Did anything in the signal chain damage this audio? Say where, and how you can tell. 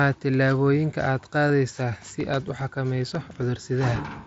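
Yes. At 1.48 s, just after "tillaabooyinka aad", there's a brief buzzy fill of about 15 ms, and a shorter, nearly hidden 7.5 ms gap at 2.98 s. This is concealed Bluetooth headset packet loss on the wireless link, where the phone papers over missing mSBC frames by repeating recent waveform.

From 2.07 to 3.56 s, twelve small regular ticks of a few milliseconds each recur at roughly eight per second. These are CD scratch ticks from storage and playback: once per disc turn, a blemish exceeds error correction, forcing interpolation.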